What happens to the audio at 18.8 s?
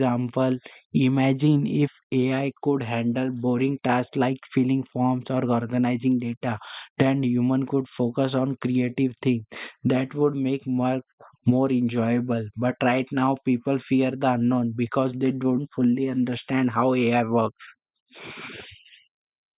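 Nothing goes wrong at 18.8 s: the speech there plays through intact, with no dropout, click, distortion or other fault at that moment.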